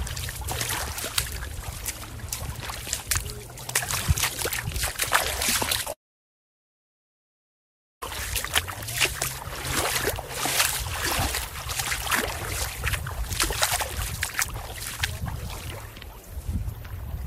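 A recording of everyday sounds, choppy from 5.66 to 5.91 s: repeated packet loss, five short holes up to 14 ms patched by repeating sound, unlike one continuous dropout. From 5.93 to 8.03 s a long network dropout likely cuts about 2.1 s; a brief fading tail gives way to silence, and the sound resumes with that stretch missing rather than paused.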